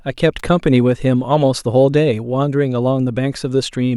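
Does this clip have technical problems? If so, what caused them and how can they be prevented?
Yes, there's a sharp snap at 0.39 s, peaking around -20 dBFS over the speech, likely an electrical switching spike from a nearby switch arcing. Keep switched gear off the audio line and use shielded cabling.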